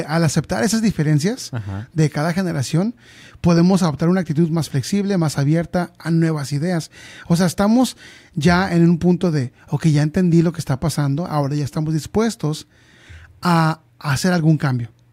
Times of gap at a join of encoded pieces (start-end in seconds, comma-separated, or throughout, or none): none